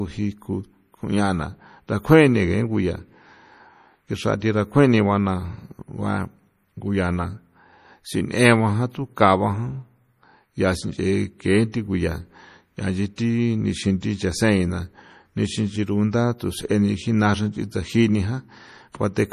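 Speech runs through the whole recording with a watery, swirling texture, with metallic chirps on sibilants and softened consonant attacks. Nothing is present above 15.2 kHz, a hard ceiling on the treble. Together these point to likely MP3 compression at a low bitrate, consistent with something around 40 kbps. With so few bits, the encoder cuts the top band at a fixed frequency and drops weaker frequency lines, which flicker on and off from frame to frame and produce the swirl. At 13.16 s a brief hiss, about 19 ms long, arrives just ahead of a sharp onset, which then sounds smeared rather than crisp. This is pre-echo. The transform codec spreads its quantisation noise across an entire block, so when a loud attack lands late in that block, noise scaled to the loud part leaks into the quiet moment before it.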